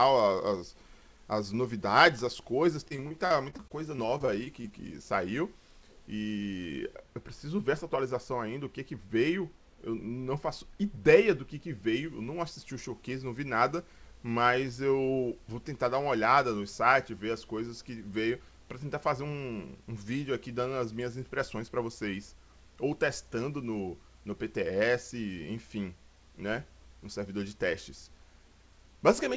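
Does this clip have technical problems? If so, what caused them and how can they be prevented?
Yes. From 2.88 to 4.73 s the sound turns choppy and robotic, with a rapid run of short holes, the longest about 44 ms. This is repeated packet loss: packets kept going missing or arriving late, and each gap was patched by stretching the previous sound. A steadier network connection, or a larger jitter buffer with forward error correction, would prevent it. The band stopping at 8 kHz fits the G.722 call codec.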